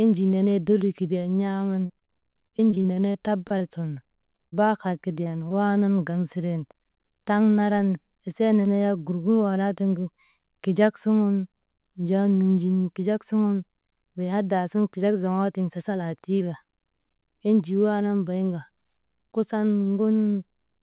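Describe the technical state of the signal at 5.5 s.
A brief smear at 5.49–5.52 s, right before "waanan gaŋ siren": short concealed packet loss, the receiver extending the preceding sound to fill 15 ms of the 20 ms of missing audio.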